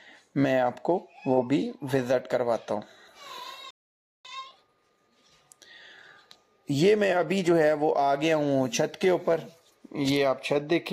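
At 3.71 s the audio cuts out mid-flow and the output stays silent until 4.25 s, a gap of about 0.54 s. This is a playback stall. The likely cause is that the player either ran out of buffered data or had its output thread blocked, so nothing reached the output until it recovered. The break sounds abrupt because the sound is interrupted rather than faded, and it leaves a clear hole in the timeline.

From 4.25 s to 5.33 s the audio runs at 1.5 times normal speed while keeping its original pitch. This is time-compressed catch-up. After the stall, the player works off its accumulated backlog by removing short segments and cross-fading the remaining pieces together, so the material moves faster without shifting upward in pitch. Over those 1.08 s the sound feels hurried and compressed, then settles back to normal pace once the backlog is cleared.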